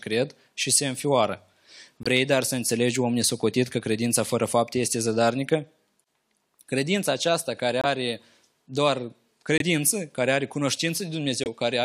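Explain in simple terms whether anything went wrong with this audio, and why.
Corrupt frame muted, at 2.03 to 2.07 s (just before "dar să înțelegi om"), 7.81 to 7.85 s (just after "aceasta care"), 9.58 to 9.62 s and 11.44 to 11.48 s. The speech stops dead for about 40 ms each time. The audio was stored as small compressed chunks, and some chunks were damaged. The player couldn't decode them and played silence instead. The rest of the speech keeps its timing.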